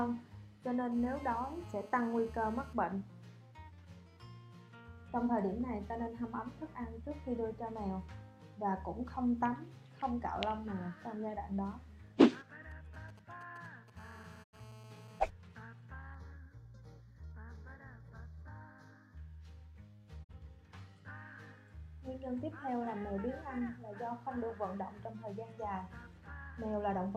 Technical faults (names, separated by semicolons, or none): GSM phone buzz; GSM signalling bursts; digital broadcast dropout; channel delay (comb filtering)